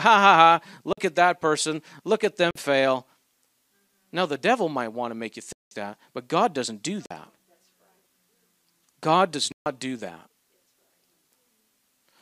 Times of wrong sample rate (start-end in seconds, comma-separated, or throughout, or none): none